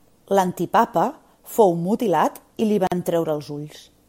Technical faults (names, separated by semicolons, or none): gap at a join of encoded pieces